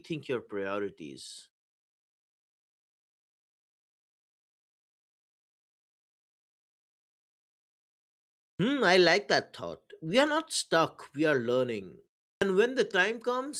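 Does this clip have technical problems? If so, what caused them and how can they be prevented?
Yes. Clipped start after a pause at 8.5 s and 12.32 s: the output device was idle and had to wake, swallowing about 94 ms before "I like that thought" and about 96 ms later. Keeping the output stream open during silence, or disabling the device's power-saving sleep, would prevent it.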